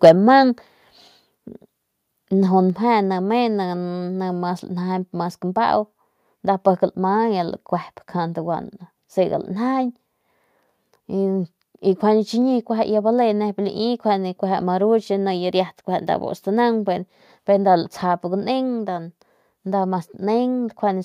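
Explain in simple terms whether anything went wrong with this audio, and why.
At the very start of the speech, from 0.04 to 0.11 s, the loudest moment has a harsh, crackly edge. That is microphone overload. The sound was most likely too strong for the microphone's input, so the tops of the biggest peaks were flattened off, affecting a fair share of that short stretch. This is different from a level drop, because the sound doesn't get quieter. It gets rough and buzzy right on the peak.

Three times, at 0.09 s, 1.08 s and 2.7 s, the voice and the background both become a little quieter in one sudden step and stay at the new level. That is the microphone volume being stepped down, most likely by the call software turning the input down after the distorted start. Unlike overload, nothing sounds damaged or crackly. Everything just gets a notch softer at once, and each step stays.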